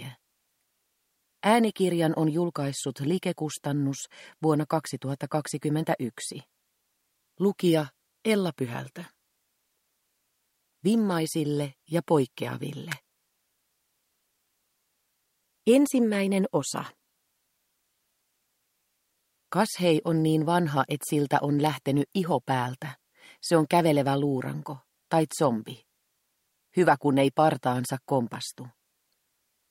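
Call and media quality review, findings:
Electrical switching spike at 12.92 s and 21.66 s: sharp snap added over the sound, peaking around -10 dBFS. Waveform shows a needle-thin spike; spectrogram shows a thin full-band vertical line. Likely a nearby switch, motor or static discharge arcing onto the audio line.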